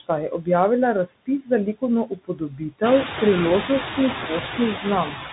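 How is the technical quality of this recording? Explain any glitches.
The recording has clear technical faults: a narrowband Bluetooth headset codec colours the whole clip, a noise suppressor leaves audible traces throughout, and twice it swallows part of the speech itself.

The Bluetooth CVSD headset codec is present from start to finish. Nothing above about 3.8 kHz survives, so the speech sounds boxed-in and telephone-like. The damage is plainly audible: s sounds come out scratchy, loud bright syllables distort as the one-bit up-or-down coder's adapting step fails to keep pace, and a granular hiss sits under the speech. This fits a 64 kbps CVSD link. Plain band-limiting is smooth. This codec adds grit and slope distortion on top of the dull top end.

Noise suppressor artifacts also run throughout. The suppressor pulls down only about 5 dB of what it judges to be steady noise, frame by frame, so the background dips in pauses and swells back under speech. 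This is most noticeable after about 3.0 s, where the room noise rises by about 14 dB to sit only about 8 dB below the speech. Steady hiss would stay level. This residue pumps with the speech.

Speech cut by the noise suppressor occurs twice. From 2.07 to 2.61 s, just after "objavila razpis za likovno", roughly a fifth of a second of speech is pulled down by as much as about 20 dB, so sounds there seem swallowed. From 5.08 to 5.26 s, roughly a tenth of a second drops by up to about 8 dB and turns faint. A dropout silences everything abruptly. Here the quiet speech sinks together with the background, as though it had been taken for noise.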